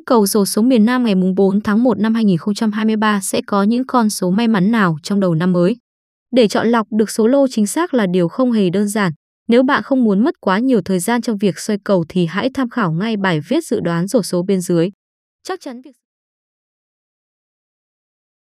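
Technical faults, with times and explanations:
No technical faults are present in the signal, and the smooth fade-out that begins around 14.5 s and reaches silence at 16.06 s is a deliberate, editor-style ending.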